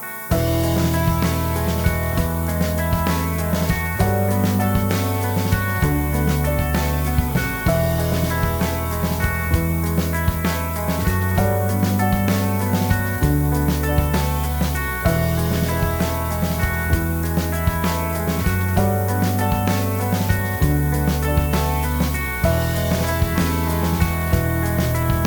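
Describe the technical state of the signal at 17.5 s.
At 17.5 s the signal, like the whole clip, suffers low bit depth with noise shaping: 6-bit rounding error is pushed upward, giving a thin hiss about 10 dB under the sound, strongest at the top.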